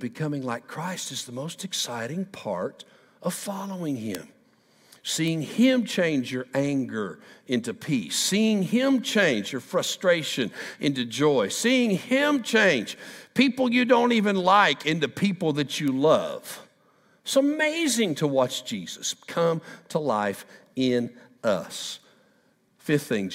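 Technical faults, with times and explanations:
4.15, 5.28, 9.87 and 15.88 s: bit error spikes. Each is a single sharp tick, broadband and unrelated to the surrounding audio. A flipped bit in the stored or transmitted sample word makes the value jump by a power of two and then return. The 4.15 s tick peaks at about -7 dBFS and its length suggests two adjacent corrupted samples. The other three each reach about -13 dBFS and are single-sample errors.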